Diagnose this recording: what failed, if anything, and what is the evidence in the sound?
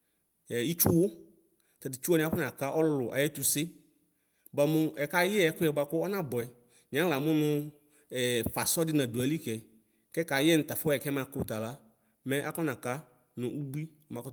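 Nothing failed in this recording.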